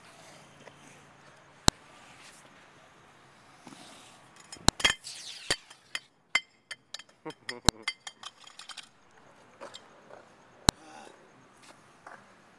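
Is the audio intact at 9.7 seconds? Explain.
Yes, at 9.7 seconds the audio plays through cleanly, with no dropout, click, distortion or other fault to be heard at that point.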